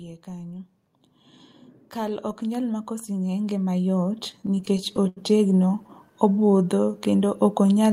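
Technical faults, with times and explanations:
1.94–7.93 s, automatic gain rising: the gain control judged the input too quiet and raised its level gradually, so speech and background swell together to the end.
4.17–5.18 s and 5.56–5.90 s, repeated stalls (stutter): late packets emptied the jitter buffer 16 times, then 4 times. Concealment continued the last sound for 231 ms and then 36 ms, with gaps up to 82 ms and 11 ms. Nothing is lost, but the speech drags and stutters.
6.33–7.68 s, jitter buffer slow-down: to rebuild its reserve, the receiver repeated pitch periods and pause fragments. This added 149 ms, so the speech runs at 89% speed with unchanged pitch.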